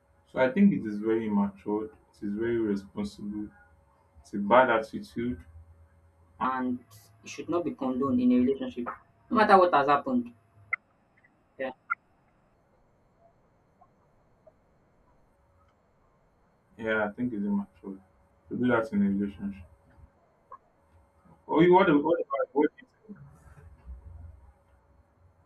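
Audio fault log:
6.45–12.54 s, section at the wrong speed: this stretch was likely played back against the wrong clock, running 1.22 times too fast. Pitch and pace rise together, so the speech jumps up about three semitones and sounds hurried until it returns to normal at 12.54 s.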